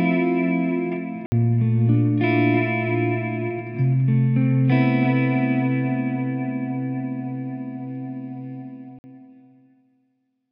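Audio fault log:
1.26–1.32 s and 8.99–9.04 s: block of digital silence. The audio drops to silence for 60 ms and then 52 ms, with no fade in or out. The edges are abrupt, so each gap is heard as a short hole.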